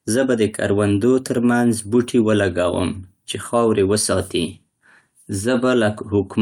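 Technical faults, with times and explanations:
No technical faults detected.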